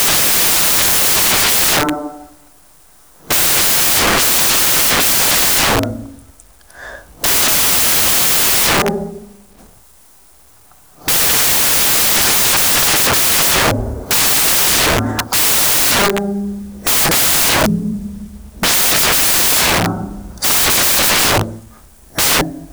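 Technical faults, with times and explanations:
Throughout: samples built from the wrong bytes. The bytes making up each sample are being assembled incorrectly, whether shifted by one byte, in swapped order, or read at the wrong alignment, so the rapidly fluctuating low-order bits end up as the most significant part of every value. The speech is overlaid with loud, harsh broadband noise, close to white on the louder sounds.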